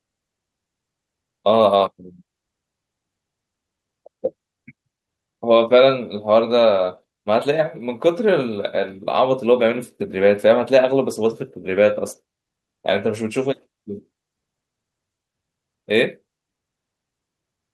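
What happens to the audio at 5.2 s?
Nothing goes wrong at 5.2 s: the speech passes through intact, carrying only the ordinary coding character and upper-frequency limit of the call path it travelled over.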